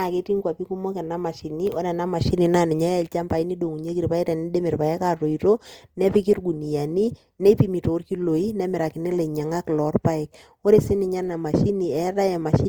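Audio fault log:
throughout: Opus compression. The speech sounds grainy and rough, with noisy texture filling the bands where clean detail should be, yet the top end stays open to about 20.2 kHz. This is likely Opus music-mode coding at a bitrate near 24 kbps.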